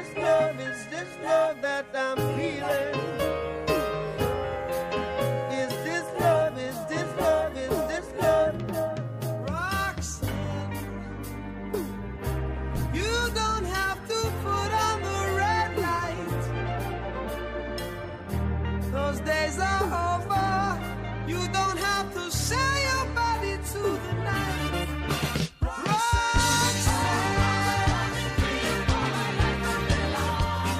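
At 5.74 s, compressed frames are skipped: a single frame of the encoded stream, about 23.2 ms long, goes unplayed, so the audio jumps ahead by roughly 20 ms. The surrounding material is joined directly, giving either a brief smeared blip or a hard click at the seam. On a waveform this shows as an abrupt discontinuity. On a spectrogram it appears as a thin vertical stripe of broadband energy where the time axis quietly loses a slice.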